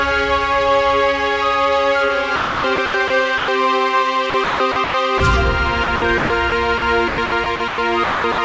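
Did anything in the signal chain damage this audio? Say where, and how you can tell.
Yes. Sound chopped by the voice detector, at the call-processing stage, appears at 2.36–3.10, 4.30–5.20, 5.84–6.52, 7.08–7.78 and 8.04–8.38 s. Each stretch has holes where the sound is replaced by synthetic comfort noise, losing 240 to 400 ms. The cause is likely the sender's detector gating on and off repeatedly.

Sound dropped by the voice detector, also in the sender's call processing, occurs at 3.38–3.48 s (100 ms) and 6.78–6.82 s (40 ms). The sound gives way to steady comfort noise, then returns. The detector likely judged quiet material as background and briefly stopped sending.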